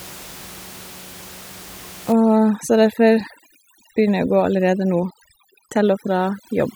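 Speech with room noise about 20 dB below the voice; from 2.12 s to the end, overdone noise removal drops the background, leaving twinkling specks, gated per frequency band rather than smeared throughout like low-bitrate coding.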